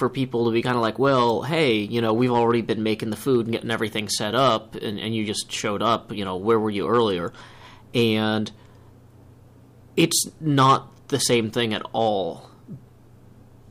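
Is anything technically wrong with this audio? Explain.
Yes. Hard clipping runs throughout the clip. The signal is driven about 8 dB beyond what the path can carry, so whenever a peak exceeds the ceiling its top is sliced off flat. Only a small fraction of the samples, roughly half a percent, hit that limit, but each flattened peak adds a burst of high harmonics. The result is a brittle crackle riding on the loudest moments rather than a constant fuzz.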